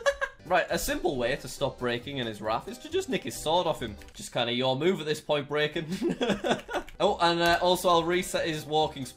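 Clock drift between sender and receiver runs through the whole clip, with the sending end's clock about 4 percent fast. Because audio arrives a little quicker than the receiving end plays it out, the jitter buffer keeps gaining material and has to be trimmed to stop it overflowing. Left alone, that surplus would pile up as growing delay, so the receiver keeps discarding small slices of sound, giving a faint, recurring unevenness in timing.

Repeated timing corrections are heard from 0.02 s to 9.06 s, the receiver's response to that fast clock. It cuts short pieces out of the stream so that playback effectively runs at 104 percent to keep pace with the sender. Every edit goes the same way, removing audio, but they land at irregular spacing. Each cut is tiny, so the result is slight hiccups and a subtly unsteady, hurried tempo rather than obvious gaps.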